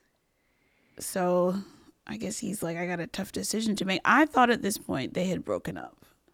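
Speech recording; no technical faults detected.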